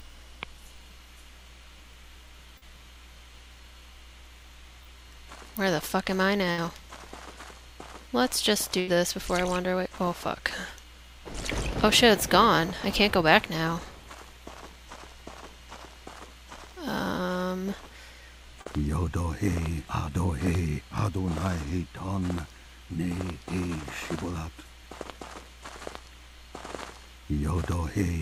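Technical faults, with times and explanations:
2.57 to 2.63 s, 4.83 to 4.87 s and 18.61 to 18.67 s, short concealed packet loss: each time a small chunk of audio didn't reach the decoder in time, about 40 ms, 20 ms and 40 ms respectively. The receiver patched each hole by carrying the preceding sound forward, pitch-based if it was voiced and shaped noise if not, then blended back into the real signal. You hear it as a quick smear or wobble.
6.51 to 6.60 s and 8.80 to 8.89 s, burst of packet loss: here a longer run of packets went missing or arrived too late. The receiver filled about 64 ms the first time and 77 ms the second, against roughly 60 ms and 80 ms of real audio lost. During the fill it kept extending the last sound and turned it down as the gap went on, so you get a held buzz or a fading hiss. Then the audio resumes further along, and the stretch in between is simply gone.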